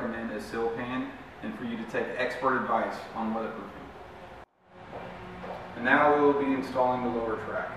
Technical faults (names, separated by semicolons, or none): none